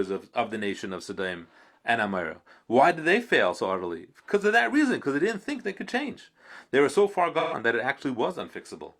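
At 7.39 s the decoder stopped receiving AAC frames and ran concealment until 7.54 s, an AAC frame loss with concealment covering about 128 ms of speech, which fits roughly three lost frames. With no real data, the decoder rebuilt the gap from the last good spectrum, either scrambling its signs or interpolating its energy. The result is a brief patch where the speech turns smeared, noisy or phasey before normal decoding resumes.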